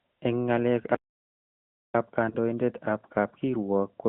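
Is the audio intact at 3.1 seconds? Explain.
No. At 3.1 seconds, as throughout the clip, the speech sounds boxy, buzzy and synthetic, squeezed into roughly 150 Hz to 3.4 kHz. This is the AMR narrowband mobile codec, rebuilding the voice from a vocal-tract model, at a quality that fits about 10 kbps.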